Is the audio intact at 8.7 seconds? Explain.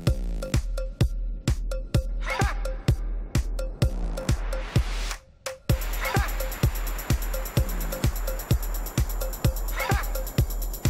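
Yes, the audio is intact at 8.7 seconds, with no dropout, click, distortion or other fault at that point.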